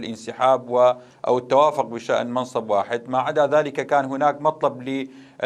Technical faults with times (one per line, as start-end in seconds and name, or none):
none